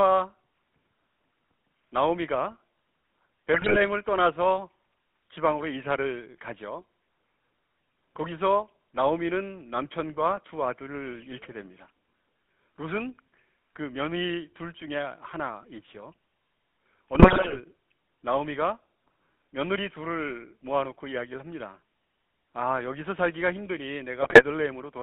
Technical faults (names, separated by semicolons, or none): GSM full-rate codec; GSM bit errors